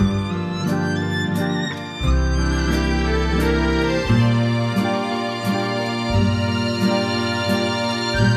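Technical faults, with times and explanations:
Nothing technical to flag here, as no faults turn up anywhere in the clip.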